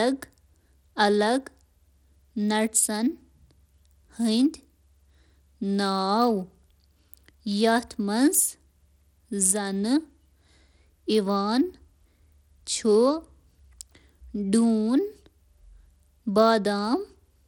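Throughout, the treble flickers and gritty aliasing rides on the speech. Likely Bluetooth SBC compression starves the top sub-bands. Nothing survives above 19.7 kHz.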